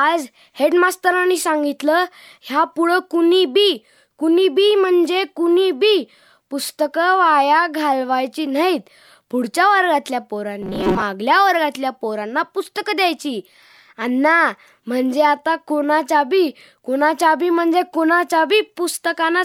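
From 10.62 to 11.03 s the speech collapses into a rigid metallic buzz pitched around 188 Hz: robotic sound from repeated short buffers. Likely the audio arrived too slowly and a roughly 5 ms chunk kept looping, covering about half that stretch.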